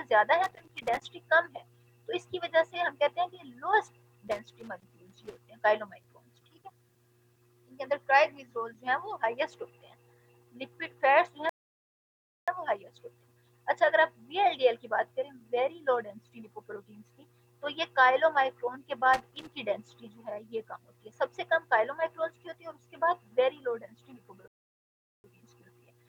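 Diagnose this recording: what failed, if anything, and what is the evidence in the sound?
The analogue wiring failed intermittently, producing loose connector crackle. Irregular bursts of crackle and scratching occur at 0.44 to 1.02 s, 4.28 to 5.39 s and 19.14 to 19.55 s. A worn contact makes and breaks as it moves. This chops the signal, and any DC on the line adds pops.

Playback also suffered rebuffering stalls at the network and buffer stage. The sound cuts to silence at 11.49 s and resumes at 12.48 s, adding 0.98 s. It stops again at 24.48 s and resumes at 25.24 s, adding 0.76 s. The player ran out of downloaded audio, then continued exactly where it stopped.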